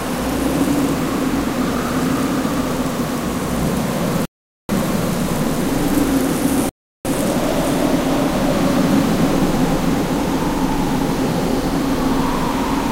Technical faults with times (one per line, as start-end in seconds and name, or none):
4.25-4.69 rebuffering stall
6.69-7.05 rebuffering stall